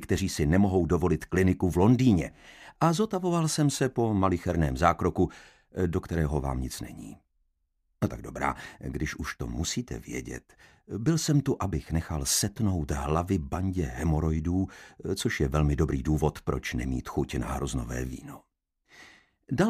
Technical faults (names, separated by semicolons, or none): none